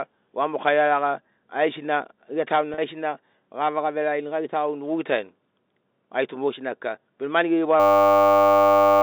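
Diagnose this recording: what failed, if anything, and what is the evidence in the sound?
Network stage: packet loss with pitch repetition at 2.74–2.78 s. About 40 ms of audio went missing, which fits four lost packets, and the receiver bridged the gap by replaying the last pitch period. The speech briefly turns into a held, buzzy tone before resuming through the G.711 telephone channel.

Driver or buffer stage: a system hang loop runs from 7.8 s to the end, starting right after "kika bena mani geri". The host stalled while the hardware kept cycling one 10 ms block of the ring buffer, so the audio becomes a steady 100 Hz buzz, and about a second and a half of speech never arrives.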